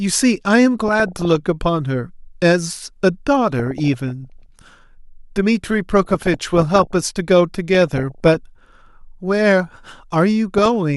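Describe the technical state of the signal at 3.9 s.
At 3.9 s the speech sits inside a stretch of DAB burbling running from 3.52 to 4.42 s. Reception was weak enough that bit errors, at an error rate of around half a percent, slipped past error correction into the MP2 data. Corrupted samples put short blips of noise into single sub-bands, and corrupted scale factors can make sub-bands jump in level for up to a frame, consistent with a few dozen damaged frames. The result is short blips of noise over the speech.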